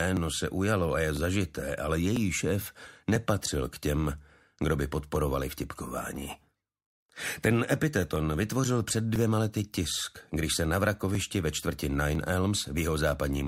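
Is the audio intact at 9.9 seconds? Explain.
No. The moment at 9.9 s falls within periodic USB or driver dropouts running from 0.17 to 13.15 s. About every 1.00 s, a background task stalls the USB bus or audio driver, and roughly 2 ms of audio is skipped, producing evenly spaced ticks wherever signal is present.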